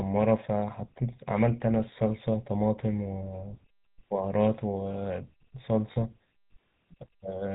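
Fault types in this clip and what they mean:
GSM full-rate codec: The whole clip has a buzzy, gravelly roughness, and nothing comes through above 4 kHz, so the speech sounds dull and rasping at once. The damage is plainly audible and fits the 13 kbps first-generation GSM codec. It keeps a simple model of the vocal tract and rebuilds the voice from a sparse train of regularly spaced pulses, which discards fine detail in the excitation and leaves that grainy, buzzing texture.
Lost GSM frames: From 5.92 to 5.97 s the sound briefly freezes into a rough, metallic ring instead of moving on naturally. The gap is 40 ms, which fits two consecutive 20 ms frames going missing. The decoder replaced them by reusing the settings of the last good frame, so the preceding sound is held and smeared rather than dropping out to silence.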